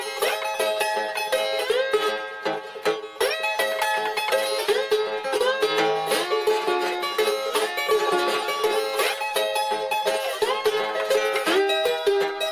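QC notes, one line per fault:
Throughout, wrong sample rate: the audio runs about 1.45 times too fast and sits 6.45 semitones high, with speed and pitch raised together by one ratio, which fits material captured at 22 kHz being played back at 32 kHz without any rate conversion.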